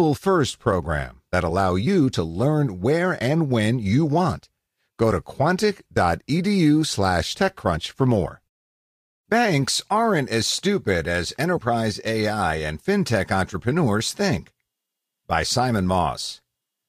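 Speech in which the decoder skipped compressed frames twice: at 7.75 s, just before "for more", and at 11.56 s, just after "aren't as stupid as". Each time a single frame, about 20 ms of audio, was missing from the stream or rejected as damaged and never played, so the speech jumps ahead by that much.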